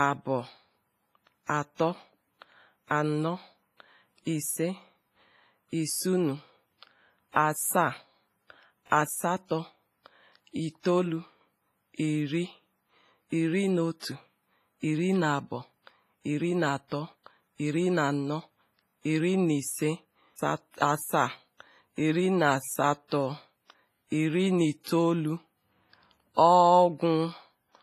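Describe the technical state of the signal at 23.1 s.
Right around 23.1 s there's a pre-echo, running from about 23.08 to 23.11 s, so roughly 33 ms of smear. A burst of hiss creeps in just before the attack rather than with it, and the onset itself comes across softened. That happens because a transform codec spreads its quantisation noise across the whole block, so the noise meant to sit under the loud attack also leaks into the quiet stretch just ahead of it.

That pre-echo sits on top of heavy compression damage across the whole speech clip, likely WMA compression from an early version of the codec. The damage is a ringing, watery quality with hiss that swells and fades along with the level, and nothing comes through above 15.4 kHz. The amount of damage points to a low bitrate in the region of 24 kbps. Long transform blocks stretch the noise over tens of milliseconds, which is exactly why the smear at 23.1 s reaches so far ahead of the attack.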